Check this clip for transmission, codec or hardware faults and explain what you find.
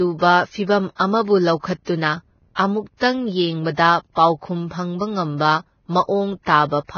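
The speech carries two codec faults: coding damage across the whole clip and two brief pre-echo events.

Vorbis compression runs throughout. Nothing is present above 6.5 kHz, and the remaining treble sounds hissy and grainy, with the damage heavy. The cause is likely low-rate Vorbis coding, and the sound fits a bitrate around 18 kbps. At that rate the encoder lowers its cut-off and quantises the upper residue so coarsely that fine spectral detail turns into noise of similar energy above the smooth floor.

Pre-echo occurs from 0.95 to 1.00 s, a 46 ms spread, and from 2.97 to 3.01 s, a 45 ms spread, just before "ꯌꯦꯡꯕꯗ ꯄꯥꯎꯈꯨꯝ ꯐꯪꯕ". In each case a sharp onset sits late in a transform block. The quantisation noise sized for that loud onset is spread across the whole block, so it also fills the quiet stretch ahead of it. This is heard as a short hiss before the attack, and the attack itself sounds soft or smeared.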